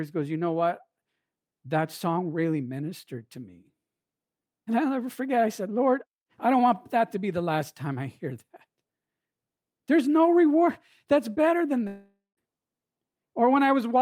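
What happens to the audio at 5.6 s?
Nothing goes wrong at 5.6 s; the speech runs on cleanly through that moment with no break, click, dropout or change in level or tone.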